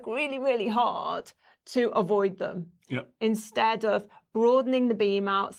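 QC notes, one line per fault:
Nothing in this speech clip stood out on listening.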